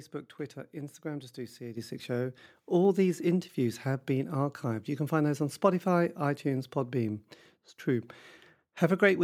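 Speech whose level jumps abruptly at about 1.77 s, just after "just do": the voice and the background noise behind it both become louder at the same instant, by about 7 dB, and stay there. This is a microphone volume stepped up: the call software judged the input too quiet and raised the microphone's input gain in a single step, so everything the microphone picks up rises together rather than the voice alone.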